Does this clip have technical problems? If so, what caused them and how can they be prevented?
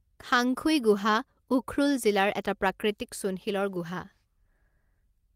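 No, this clip has no technical problems, so there is nothing to prevent.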